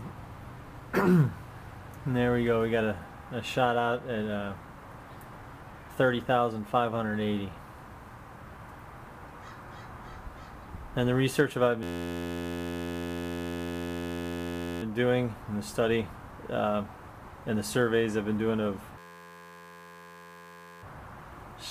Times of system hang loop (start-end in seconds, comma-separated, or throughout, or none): 11.83-14.83, 18.98-20.83